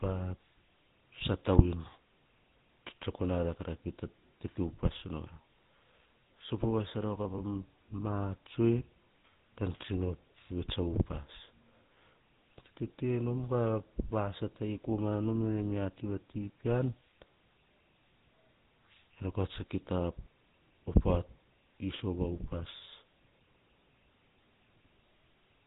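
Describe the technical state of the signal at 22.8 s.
At 22.8 s, as throughout, GSM full-rate codec damage is plain. Pulse-excited vocal-tract coding makes the speech buzzy and gravelly, with nothing above 4 kHz.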